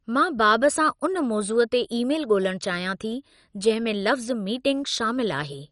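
Throughout, the speech sounds dull and gurgling, with nothing above 11.3 kHz, likely MP2 compression at a low bitrate around 48 kbps, coarsely quantising its sub-bands.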